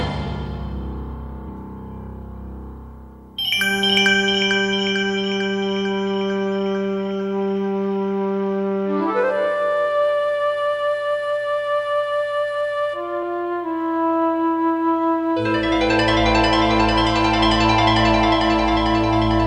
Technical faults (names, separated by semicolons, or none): compressed frames skipped